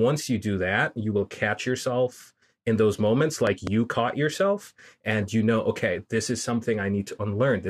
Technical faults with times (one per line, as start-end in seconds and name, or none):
3.47-3.69 loud pop